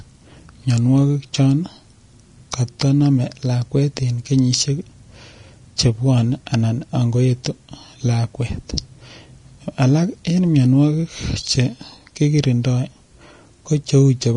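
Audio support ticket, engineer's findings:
Hissy, grainy treble throughout, nothing above 10.6 kHz; likely Vorbis compression at a low bitrate, around 35 kbps, coarse treble quantisation turning detail into noise-like grain.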